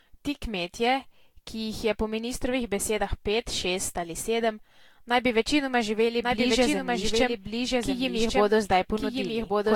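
From the first second the speech has that swirly, hollow, slightly underwater quality, with consonant attacks smeared, and nothing comes through above 19.2 kHz. That's generation loss, most likely from the audio being decoded and re-encoded with Vorbis about seven times. It fits a stream around 70 kbit/s, but it sounds rougher than that rate alone would give, because each pass quantises on a shifted frame grid and the damage piles up.

At 6.22 s a second copy of the speech cuts in abruptly and runs to the end, trailing the original by about a second and sitting roughly 5 dB quieter. It's a doubled audio track. The copy is full-band and dry, with no decay or room colour, so it reads as an exact duplicate talking over itself rather than an echo. The likely cause is a second capture through a slower path, or an edit that left two out-of-step copies stacked.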